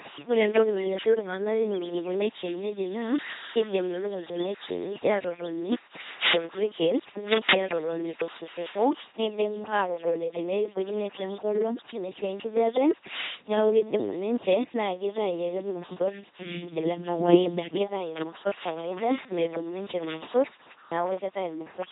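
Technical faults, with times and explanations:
Throughout, LPC-10 vocoder: heavy buzzy robotic speech from an all-or-nothing pulse-or-noise excitation through a small filter, nothing above 3.9 kHz, which fits a 2.4 kbit/s stream.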